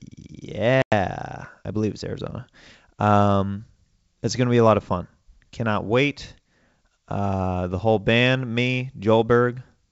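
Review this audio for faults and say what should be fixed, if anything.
Packet loss on an ADPCM call from 0.82 to 0.93 s leaves a hard-edged silent hole, roughly five packets. Speech then returns briefly with slight distortion until the decoder's predictor and step size resynchronise within tens of milliseconds. Fix this by adding packet loss concealment with decoder state recovery on the G.722 link, backed by jitter buffering or redundant transmission.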